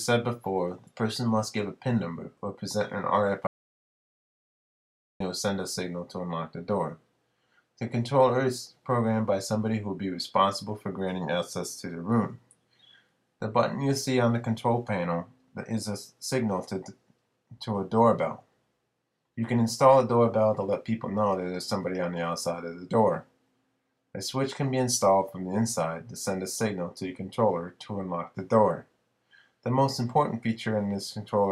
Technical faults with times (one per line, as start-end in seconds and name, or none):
3.47-5.20 audio dropout to silence